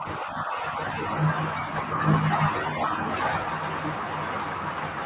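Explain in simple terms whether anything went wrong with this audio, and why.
From 0 to 0.67 s, the call's echo canceller was likely caught out by both sides talking at once. It could not tell this speaker's own voice from the echo of the other person coming through the loudspeaker, so it turned everything down. This is called speech suppressed in double talk. The speech dips noticeably quieter in patches that add up to about half a second, then returns to full level. Throughout, the phone codec passes nothing above 4 kHz, which gives the familiar narrow phone-line sound.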